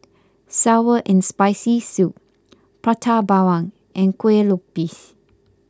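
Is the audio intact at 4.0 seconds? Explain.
Yes, the speech at 4.0 seconds is intact, with no dropout, click or other fault audible at that moment.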